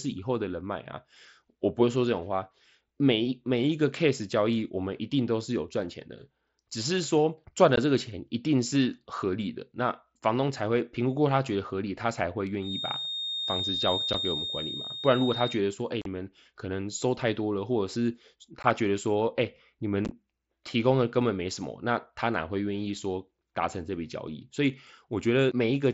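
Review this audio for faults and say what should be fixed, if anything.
Unconcealed Bluetooth headset packet loss at 7.76, 14.13, 16.02–16.06, 18.63 and 20.05–20.11 s: lost mSBC headset frames became silence or an idle pattern, showing as sharp-edged vertical gaps in the waveform and spectrogram. Keeping the headset closer to the phone, away from Wi-Fi interference, or enabling packet loss concealment would prevent it.

Feedback whistle from 12.58 to 15.62 s: a single-pitch 3.7 kHz tone a few dB below the speech, likely from loudspeaker sound reaching the microphone at the edge of feedback. It appears as a thin horizontal spectrogram line. Lowering playback volume, separating speaker and microphone, or adding a notch filter or feedback suppressor would prevent it.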